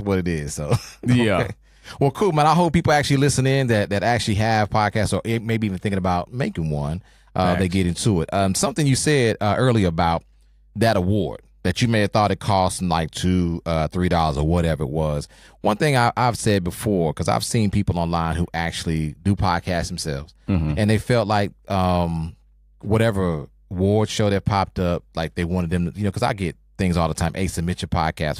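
Mains hum runs under the speech for the whole clip, a steady 50 Hz tone with low harmonics, roughly 35 dB down, from power-line coupling through a ground loop or transformer.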